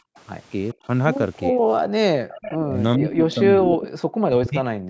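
From 0.00 to 0.16 s the room sound beneath the speech collapses by about 40 dB, and it happens again at 0.75 to 0.87 s (about 24 dB) and at 2.13 to 2.29 s (about 40 dB). This is background gated by the echo canceller: the microphone is pulled down while the far end plays, so the ambience vanishes and returns.

A faint delayed copy appears at 0.17 to 0.21 s, then more clearly at 2.29 to 2.58 s and 3.81 to 3.87 s, roughly 15 dB under the speech. This is an echo leak, likely residue the canceller missed. It trails the original by 414 ms, so it is a distinct repeat, not a dropout.

At 1.51 to 1.64 s, and across much of 2.66 s to the end, the talker's own voice dips deeply in pieces. This is speech suppressed in double talk, likely where the canceller mistook the overlapping talker for echo. Unlike the gating, here the voice itself is cut away.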